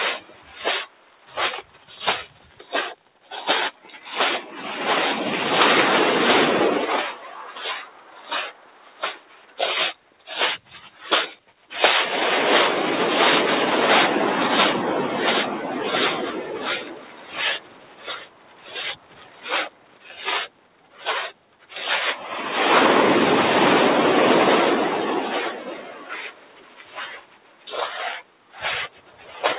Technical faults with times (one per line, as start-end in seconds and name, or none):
0.00-29.59 noise suppressor applied to music or sounds
0.20-3.32 sound cut by the noise suppressor
3.73-4.06 sound cut by the noise suppressor
7.13-9.58 sound cut by the noise suppressor
9.94-10.28 sound cut by the noise suppressor
10.59-11.72 sound cut by the noise suppressor
16.37-21.74 sound cut by the noise suppressor
25.54-27.67 sound cut by the noise suppressor
28.20-29.43 sound cut by the noise suppressor